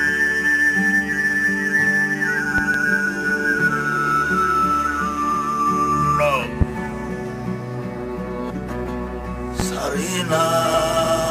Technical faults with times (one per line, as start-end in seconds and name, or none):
2.58-2.78 loud pop
6.61-6.65 loud pop
9.60-9.63 loud pop